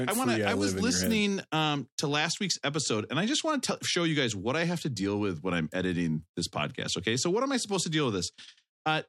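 Nothing in the speech stood out as a technical fault on listening.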